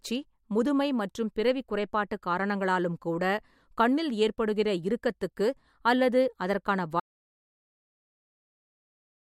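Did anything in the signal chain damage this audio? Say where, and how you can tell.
Yes: an audio dropout to silence starts at 7.0 s and runs to the end of the clip. The speech stops abruptly mid-flow, and what follows is silence with no room tone or noise floor, so it isn't a pause. That points upstream of the recorder, most likely a disconnected input device, a broken link or a stray mute, while the recorder kept writing silence. Whatever was spoken after 7.0 s is lost.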